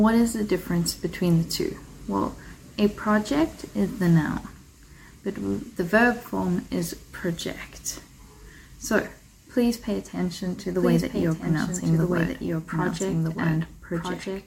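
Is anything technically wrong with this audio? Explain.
Yes. From 10.79 s to the end there is a doubled audio track. A second full-band copy of the sound enters abruptly and runs about one and a half seconds behind the original, roughly 5 dB quieter, with no decay or room colouring. The likely cause is the signal being captured again through a slower path. On a spectrogram, each pattern repeats a fixed distance later, stacked on the live material. The waveform's envelope thickens suddenly at 10.79 s.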